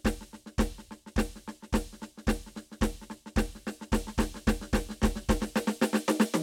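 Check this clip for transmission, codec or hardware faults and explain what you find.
One fault turns up. From 3.98 s to the end, a doubled audio track: a second, equally loud copy of the music trails by roughly a third of a second, likely from a slower capture path or misaligned edit, starting abruptly with no decay, unlike echo.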